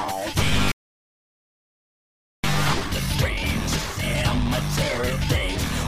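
A Bluetooth LE Audio link dropped data at 0.54 s, a gap of 7.5 ms that fits one lost LC3 frame, and the decoder filled it by repeating the previous spectrum with scrambled signs. That brief lost LE Audio frames concealment is heard as a short noisy smear in place of the true audio. At 0.72 s the player likely ran out of data or had its thread blocked, and this playback stall silences the output for about 1.7 s until 2.44 s, cutting the audio off mid-flow before it resumes. From 2.44 s to 5.44 s the player works off the accumulated backlog by time-compressed catch-up, removing small pieces and cross-fading across the joins. The audio runs about 1.1 times faster at its normal pitch, sounding hurried until it settles at 5.44 s.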